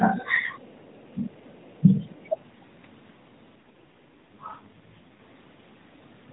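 Speech over a narrowband AMR mobile call, with nothing above 4 kHz, has two kinds of fault. Three times the talker is pulled down: briefly at 0.0–0.06 s and 1.14–1.2 s with dips of about 15 dB, and for longer at 1.8–2.32 s, dropping about 20 dB over roughly 300 ms. This is likely speech suppressed in double talk, where the echo canceller mistakes overlapping far-end audio for its own echo and attenuates the near-end talker along with it. From 3.56 s to 5.20 s the speech turns rougher, buzzier and more synthetic, with no gap and no loss of bandwidth. That points to an AMR rate drop, with the codec stepping down from about 12.2 kbps to 4.75 kbps so that more bits go to error protection on a weak radio link. The coarser vocal-tract model and fewer excitation pulses leave the speech sounding processed until the higher rate returns.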